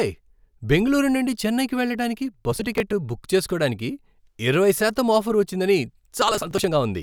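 Speech with processor overload crackle from 2.52 to 2.93 s and 6.22 to 6.68 s. Unlike an isolated dropout, dozens of skipped short buffers tear the sound into gritty bursts.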